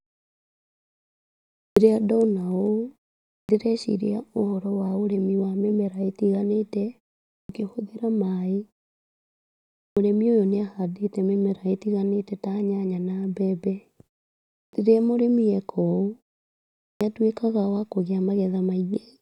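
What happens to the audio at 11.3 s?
At 11.3 s the speech runs intact, with no dropout, click or distortion at that moment.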